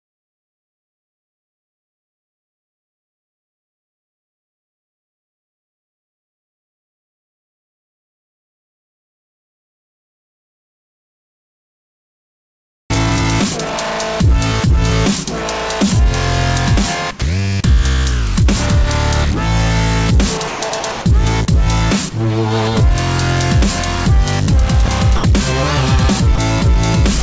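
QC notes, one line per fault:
12.94–13.23 s, jitter buffer slow-down: The receiver's buffer was running short, so it stretched this stretch by repeating single pitch periods or small slices of the pauses, adding 42 ms and playing it at 88% speed. Pitch holds steady while the sound drags. A spectrogram shows harmonics at unchanged frequencies but smeared longer in time. The waveform shows near-identical cycles repeated back to back.
13.44–13.73 s, jitter buffer speed-up: Just after the slow-down, the buffer overshot its target and the receiver trimmed it back by cutting out one or a few pitch periods at a time. That removed about 50 ms and ran the passage at 113% speed. The pitch stays the same but the sound feels hurried. On a spectrogram, harmonic tracks are compressed in time with small discontinuities. The waveform shows cycles missing at the splice points.
17.20 s, 24.86 s, 25.16–25.24 s and 26.36 s, sound dropped by the voice detector: In each of these spots the sound briefly gives way to steady noise. 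Three gaps last 20 ms and the one at 25.16 s lasts 80 ms. The likely cause is the sender's voice detector mistaking quiet material for background, halting transmission, and the receiver filling in comfort noise. A spectrogram shows brief vertical bands of uniform, structureless noise interrupting the harmonic energy. The waveform shows matching low, even patches.
20.48–21.06 s, sound chopped by the voice detector: Over this stretch the sound turns choppy, with a total of 340 ms replaced by synthetic noise in two or more pieces. This likely comes from the voice detector switching transmission on and off repeatedly, with comfort noise filling each off period. On a spectrogram, harmonic content breaks into segments separated by featureless noise blocks. The waveform shows an uneven, gated envelope.
Throughout, the G.722 call path at 64 kbps leaves nothing above 8 kHz. This appears as a hard ceiling on the spectrogram.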